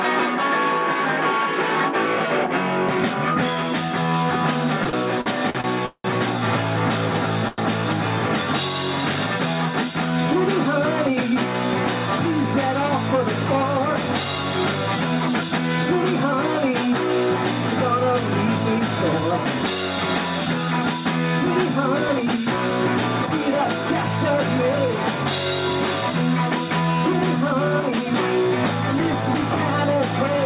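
Audio carried over a narrowband call path, with nothing above 4 kHz, consistent with G.711 mu-law at 64 kbps. From 4.84 to 6.06 s there are repeated stalls (stutter): packets arrived late six times, the jitter buffer ran dry each time, and the receiver extended the last sound for 356 ms in total, the longest hold 184 ms. That concealment fills about 29% of the span, so the audio drags and stutters without losing content. At 7.48 to 7.60 s a short stall from a late packet holds one sound for 96 ms, with a slight buzz or dip, before playback resumes from the same point with 96 ms more delay. Jitter buffer speed-up then trims the built-up delay by cutting pitch-period-length pieces. This happens at 13.14 to 15.59 s (3% fast, about a tenth of a second removed), 17.71 to 19.97 s (7% fast, about 150 ms), 21.99 to 23.27 s (4% fast, about 50 ms) and 29.14 to 29.57 s (7% fast, about 40 ms). In each span the pitch stays the same, and in the two 7% spans the timing sounds hurried.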